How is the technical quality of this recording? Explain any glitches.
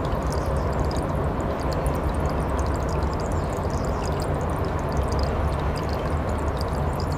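Nothing in the recording stood out as a technical problem on listening, and there are no glitches to explain.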